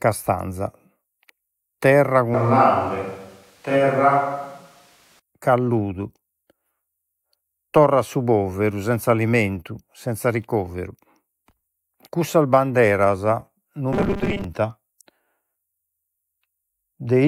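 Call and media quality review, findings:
Switch to a distant microphone, 2.34–5.19 s: close mic signal likely dropped, capture falling back to a far pickup such as a camera mic. Voice abruptly roomy and hollow, thinner bass, little level change, room noise about 35 dB below speech, abrupt return.

Robotic sound from repeated short buffers, 13.93–14.44 s: audio likely arriving late, playback looping its last block, consistent with a 5 ms buffer; about half the span is repeats, real audio skipped. Speech becomes a rigid metallic buzz fixed at 200 Hz.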